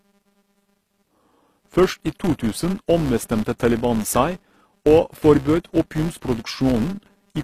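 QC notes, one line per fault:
Throughout, filter restarted on every block: each block starts from silence with a small transient, producing a 200 Hz buzz that tracks the speech level, which fits 5 ms blocks.
Throughout, HE-AAC compression: plainly audible codec damage, nothing above 14.9 kHz, s sounds gritty from treble rebuilt out of copied lower bands, likely a low-bitrate stream near 24 kbps.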